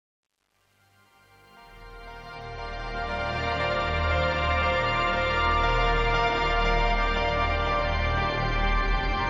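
The music opens with truncation distortion on the fade-in, running from the start to about 3.51 s. The gain stage is only keeping around 9 bits and isn't adding dither, so at low levels the waveform collapses into a handful of coarse square steps. It's worst over the first 2.51 s, where the quiet sound turns gritty. As the fade climbs toward 3.51 s and the level rises, the grit clears.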